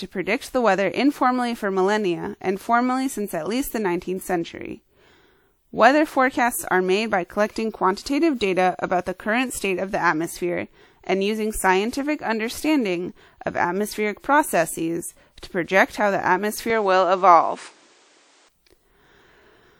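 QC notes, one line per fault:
16.70–18.49 s, input switched to a poorer device (likely cause): the speech loses everything above 9.6 kHz, so the top end turns duller, and a new background noise floor appears roughly 35 dB below the signal. Level stays about the same and there is no gap at either transition, pointing to a changeover to a narrower-band input with its own noise rather than a dropout. Full bandwidth returns at 18.49 s.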